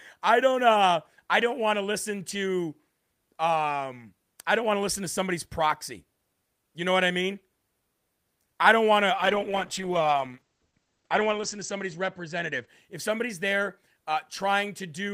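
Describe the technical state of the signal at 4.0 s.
At 4.0 s the speech signal is intact, with no dropout, clipping, glitch or other technical fault audible at that point.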